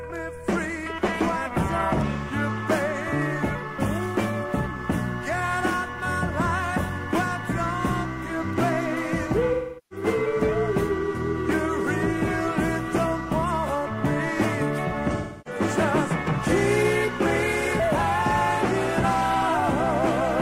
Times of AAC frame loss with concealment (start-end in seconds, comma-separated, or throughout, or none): 9.52-10.06, 15.16-15.60